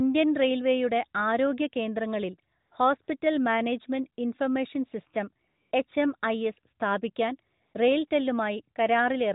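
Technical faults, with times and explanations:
2.60–2.72 s, 3.04–3.08 s, 5.48–5.72 s, 7.62–7.74 s, 8.08–8.10 s: AMR comfort noise. In each gap, the phone stopped sending speech frames. The receiver substituted smooth synthetic noise that switches abruptly in and out. The lightly coded narrowband speech fits AMR-NB at 12.2 kbps.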